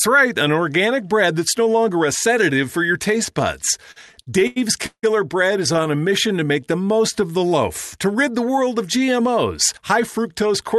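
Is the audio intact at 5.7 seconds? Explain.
No. From 5.73 to 5.87 s there are repeated stalls (stutter): late packets emptied the jitter buffer four times, and the receiver stretched the preceding sound to cover 43 ms, about 30% of the span, in gaps no longer than 13 ms. Nothing is lost, but the speech briefly drags and stutters.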